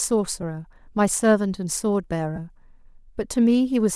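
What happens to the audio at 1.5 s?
At 1.5 s the speech carries a breathy, grainy edge that runs through the whole clip. The likely cause is Bluetooth LC3 compression, in 7.5 ms frames. Upper frequencies are partly replaced with noise, which fits a 48 kbps stream.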